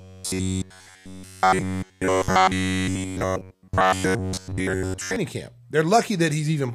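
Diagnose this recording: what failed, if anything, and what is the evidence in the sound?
The driver or buffer stage most likely ran short of fresh audio and filled the gaps by replaying a block of about 10.7 ms. From 0.01 to 5.16 s this gives robotic sound from repeated short buffers: a rigid, metallic buzz fixed near 93.8 Hz over essentially the whole stretch.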